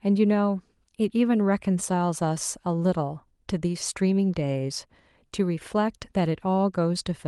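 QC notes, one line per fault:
No faults to log: the speech comes over a call link whose coding texture and top end near 12 kHz fit an Opus stream at around 32 kbps.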